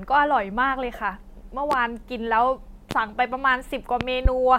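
Loud pops occur at 1.72 to 1.75 s and 2.91 to 2.94 s, each a single sharp pop about 15 dB above the speech, then a double pop from 4.01 to 4.29 s, nearer 20 dB up. A sudden voltage step, likely from a plug, switch or static, adds these transients while the speech continues underneath.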